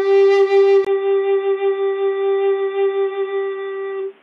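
At 0.85 s a 20 ms gap appears in the waveform. Then the music turns dull and quieter, and the spectrogram goes blank above 3.6 kHz. The likely cause is an input switched to a poorer device.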